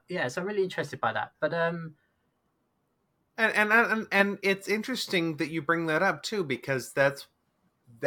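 Nothing goes wrong anywhere in this bit of speech, so there's no technical fault to point to at any moment.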